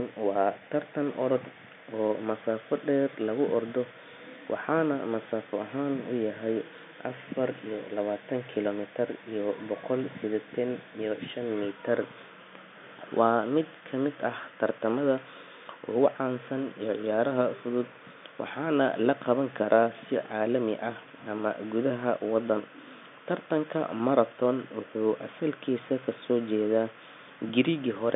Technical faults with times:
none

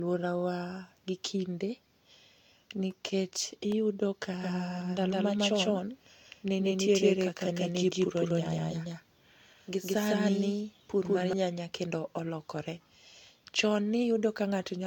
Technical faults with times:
0.00-14.86 generation loss
2.70-3.72 CD scratch ticks
4.41-11.33 doubled audio track

